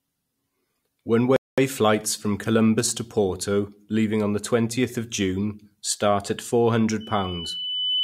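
A short speech recording carries two technical faults. The first is a playback stall from 1.36 to 1.58 s: the sound cuts out mid-flow for about 210 ms and then resumes with "flights from", most likely because the player ran short of data or its output thread was briefly blocked. On a waveform it appears as a flat, empty gap interrupting continuous speech energy, and on a spectrogram as a clean vertical band of nothing across all frequencies. The second is a loudspeaker feedback squeal starting at 7.00 s, just after "start at", and running to the end of the clip. A microphone is picking up the speaker it feeds, and at 3 kHz the loop gain tops unity, so that single tone swells over roughly a second until it is about as loud as the speech itself. A spectrogram shows it as a thin horizontal line at 3 kHz that brightens steadily, and the waveform envelope fattens as the tone builds.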